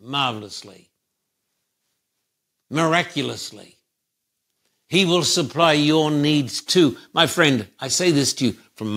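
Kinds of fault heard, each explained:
Automatic gain rising: from about 4.91 s to 7.03 s the whole speech signal swells upward, the talker and the background noise beneath growing louder together by about 5 dB over roughly two seconds, with no sudden step. This comes from the automatic gain control judging the input too quiet and slowly turning its gain up, so everything in the path, including room noise, is lifted at the same gradual rate.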